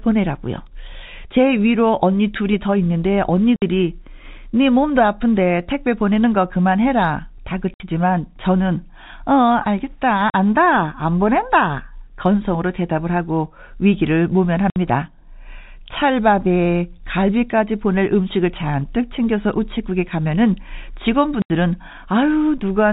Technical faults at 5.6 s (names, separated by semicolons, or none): none